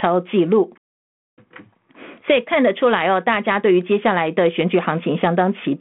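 No technical faults are present.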